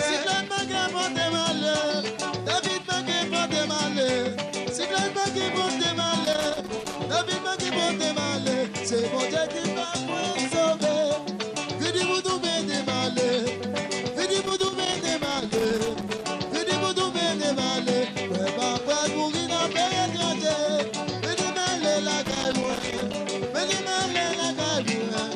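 Loose connector crackle bursts in at 6.25 to 6.97 s, 14.42 to 16.22 s and 22.25 to 23.15 s as a worn contact chops the signal. The scratchy, irregular spurts come in clusters, unlike the steady, evenly spread ticks of surface noise or the clean gaps of digital dropouts.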